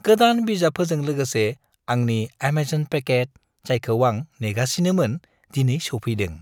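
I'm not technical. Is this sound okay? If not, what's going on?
No, from 3.07 to 3.75 s the speech briefly runs about 6% fast and a semitone high, then snaps back: likely a drift correction step.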